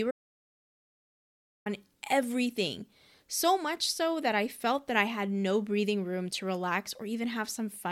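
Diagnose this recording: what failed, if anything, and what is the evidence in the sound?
Audio dropout to silence from 0.11 s to 1.66 s: the speech cuts off abruptly just after the start and returns mid-flow about 1.55 s later. The gap is silence with no room tone or noise floor at all. The input path, most likely a disconnected device or broken link upstream of the recorder, stopped delivering signal while the recorder kept writing silence. Whatever was spoken in that stretch is gone.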